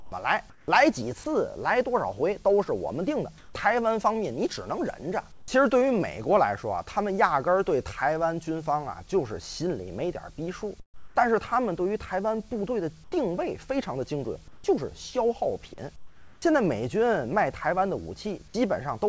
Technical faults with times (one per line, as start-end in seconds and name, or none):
0.00-0.68 comfort noise in place of the background
3.38-3.54 comfort noise in place of the background
5.32-5.48 comfort noise in place of the background
10.80-11.16 comfort noise in place of the background
13.04-13.12 comfort noise in place of the background
14.48-14.64 comfort noise in place of the background
15.96-16.42 comfort noise in place of the background
16.40-16.42 onset clipped by the voice detector